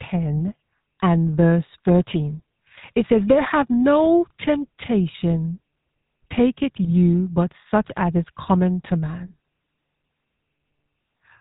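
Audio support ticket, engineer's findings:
GSM full-rate codec, whole clip: speech passed through a vocal-tract model driven by sparse regular pulses, consistent with 13 kbps GSM full rate. Symptom: buzzy, gravelly roughness throughout, nothing above 4 kHz, damage plainly audible.

GSM bit errors, 6.82 to 6.93 s: corrupted filter, pitch and gain parameters reaching the decoder over roughly 0.1 s, which fits about five damaged frames at an error rate near 2%. Symptom: brief squawk and gargle bursts, level jumps, distorted spectrum.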